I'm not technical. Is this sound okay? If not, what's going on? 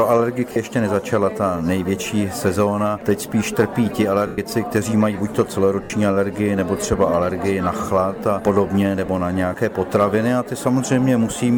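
No. There are four brief lost LE Audio frames moments, at 0.52–0.56 s, 4.27–4.38 s, 5.84–5.90 s and 9.06–9.08 s. The wireless link dropped pieces, and the receiver filled each gap with a blurred, hissy copy of the preceding sound. Unlike a clean dropout to silence, it smears. The longest gap, 110 ms at 4.3 s, fades away.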